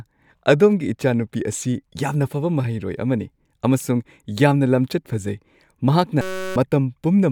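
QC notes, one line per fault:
6.21–6.56 s, system hang loop: the playback froze and the hardware kept replaying the same tiny slice of audio from its ring buffer, about 5.3 ms of it, which fits a 256-sample buffer. Repeated roughly 65 times, that slice loops about 188 times a second, so instead of a stutter you get a flat, steady buzz pitched near 188 Hz. Around 0.4 s of the real speech is lost under it.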